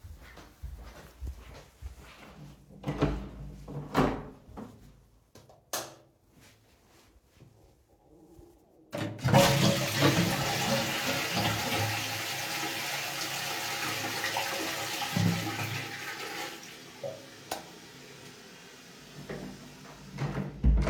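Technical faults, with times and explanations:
No technical faults can be heard in the recording; the signal stays steady and intact for its whole duration.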